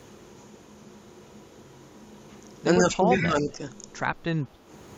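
Between 2.8 and 3.47 s the speech is held down in pieces, adding up to about half a second, and dips by roughly 5 dB at its deepest. It sounds as if the level is briefly pulled back mid-phrase. This is speech suppressed in double talk, likely from an echo canceller that could not tell the near talker from loudspeaker sound arriving at the same moment and so attenuated both. On a waveform the envelope shows shallow notches. On a spectrogram the harmonics fade slightly in those patches.

Inside that stretch, from 3.2 to 3.29 s, a faint delayed copy of the speech comes through, about 121 ms behind the original and roughly 10 dB quieter. It is a short ghost. This is an echo leak: audio played over a loudspeaker was likely picked up by the microphone and not fully cancelled, so a residue went back out. A spectrogram would show a weaker duplicate of the harmonic pattern shifted about 0.12 s later.

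At 4.53 to 4.66 s the room sound drops by about 7 dB for around a tenth of a second and then recovers. This is background gated by the echo canceller, which clamped the microphone hard while the loudspeaker was active and released it shortly after. The waveform shows a brief trough in the noise floor. The spectrogram shows a narrow vertical band where the low-level background texture thins out.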